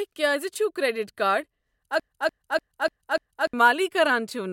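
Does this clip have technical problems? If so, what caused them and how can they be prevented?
Yes. From 2.00 to 3.54 s, a broken-record loop replays one 295 ms fragment five times, likely because the player or stream stalled on its last buffer. The original audio is lost, and the spectrogram shows identical blocks tiled edge to edge. Stall detection that fades out instead of repeating prevents it.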